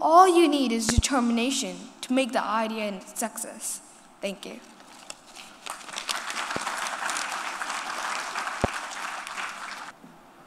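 A sudden voltage step, likely from a plug, switch or static discharge, is injecting loud pops into the signal path, with the following circuitry briefly shaping each pulse. A double pop between 0.89 and 1.01 s stands roughly 20 dB above the sound. Single pops follow at 6.56 to 6.59 s, somewhat lower at around 15 dB, and at 8.64 to 8.67 s, again near 20 dB. Each is a sharp thump over the audio, which carries on underneath.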